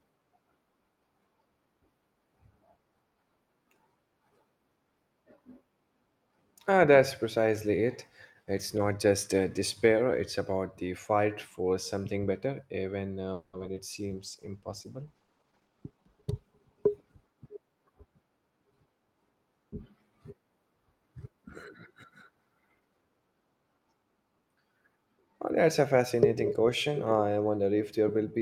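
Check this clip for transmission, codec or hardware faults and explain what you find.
Three faults cluster in the middle of the clip, between roughly 13.3 and 17.8 s.

Repeated packet loss (robotic sound) runs from 13.33 to 13.78 s, right after "something better even uh". Four gaps open in quick succession, and the receiver fills 240 ms by stretching the last good sound, leaving 60 ms missing outright. The longest gap is 200 ms, and about 53% of the span is concealed, so the speech turns choppy and broken. Unlike a bitrate drop, the damage here comes in short, distinct holes.

A call bitrate drop follows from 13.93 to 17.80 s, as the encoder falls from 48 to 14 kbps and stays at its lowest for 1.74 s. With so few bits, Opus quantises coarsely and trims the top end, so the speech turns muffled and watery. The degradation is continuous rather than choppy.

A jitter buffer speed-up overlaps this, from 15.39 to 16.94 s. 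Excess buffered audio is shed by cutting out short pitch-period pieces, about a fifth of a second in total, so the speech plays at 112% speed. The pitch stays unchanged, which distinguishes it from a clock or resampling error. The passage simply sounds hurried.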